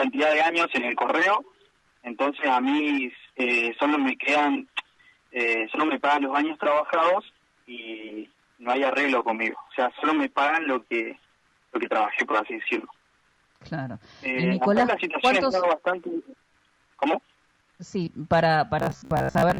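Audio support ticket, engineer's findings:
Robotic sound from repeated short buffers, 18.80–19.59 s. Audio likely arriving too seldom; playback loops the last buffer, about half the material repeated, real audio skipped. Rigid metallic buzz near 66.7 Hz, fitting a 15 ms buffer, loosely tracking the sound.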